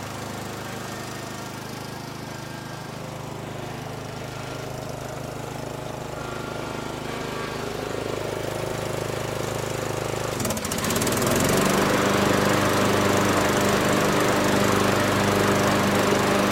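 No technical faults are audible.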